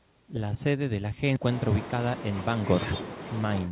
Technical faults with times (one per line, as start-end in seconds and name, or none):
1.36 skip ahead
1.48-2.73 jitter buffer speed-up